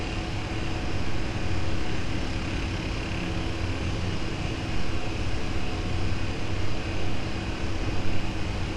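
Nothing stood out as a technical fault on listening to this recording of everyday sounds.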